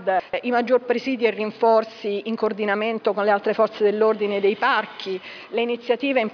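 Nothing technical stands out here; the audio runs its whole length without a single problem worth flagging.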